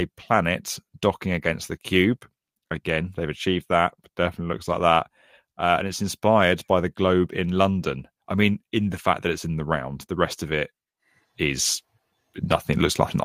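Nothing in the speech stood out as a technical problem on listening.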